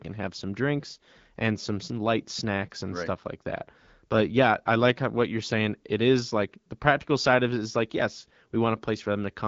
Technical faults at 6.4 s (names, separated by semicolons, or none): none